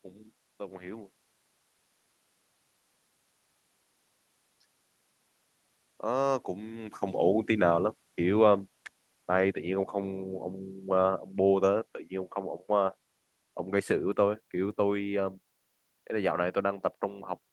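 At 7.47 s the speech level begins to drop and keeps sinking until 9.96 s, ending about 4 dB lower. This is automatic gain falling: the gain control judged the input too loud, or its background noise too strong, and pulled its gain down gradually, so the room noise drops by the same amount along with the voice. The talker's movement around 7 s changes the level at the microphone just before this, and the Opus call path's roll-off near 12 kHz stays unchanged throughout.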